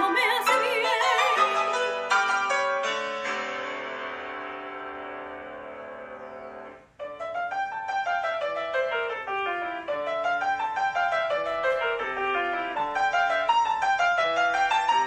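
No technical fault can be heard anywhere in this audio. There is nothing that calls for a time, a value or a cause.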